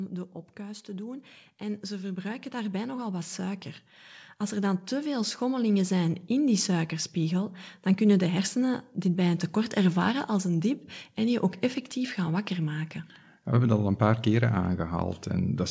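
From 0.56 to 3.67 s, then from 4.51 to 6.28 s, automatic gain rising lifts the level by about 7 dB and about 4 dB. Speech and background noise swell together over one to three seconds, unlike a talker moving closer, which raises the voice alone.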